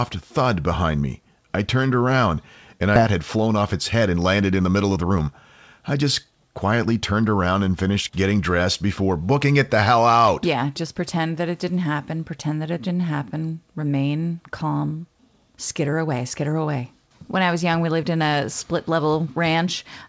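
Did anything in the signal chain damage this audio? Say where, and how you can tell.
Yes. A skip ahead in the network jitter buffer at 2.96 to 2.98 s drops about a second, leaving a hard waveform splice with no silent gap on the spectrogram.

Jitter buffer speed-up runs from 3.09 to 5.29 s at 120% and from 5.79 to 7.29 s at 108%. Pitch-period trimming shortens syllables while the harmonic spacing on the spectrogram stays unchanged.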